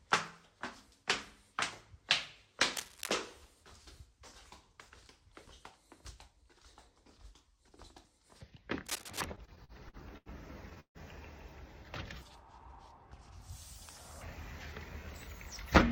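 A recording of everyday sounds with three kinds of fault. Cable scratch noise appears at 2.77–3.12 s and 8.86–9.24 s: dense, uneven broadband bursts only slightly quieter than the sound, likely from a worn cable or connector being moved. These show as ragged vertical smears on a spectrogram. Repeated stalls (stutter) follow from 9.35 to 10.29 s. Six short holds fill about 225 ms, the longest 84 ms, so the sound drags without losing anything, and repeated held stretches break up the waveform. A call audio freeze at 10.80–10.98 s holds the last sound for 148 ms, fading into 80 ms of near-silence, likely from packets delayed enough to empty the jitter buffer. It shows as a smeared band thinning to a blank gap before the sound resumes.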